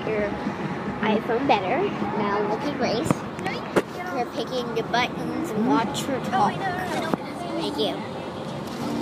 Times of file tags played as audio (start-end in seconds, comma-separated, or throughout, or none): none